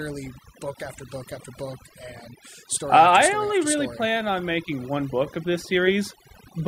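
Throughout, overdone noise removal mutes bands near the noise estimate; unlike codec warble, pauses drop to near silence with twinkling specks.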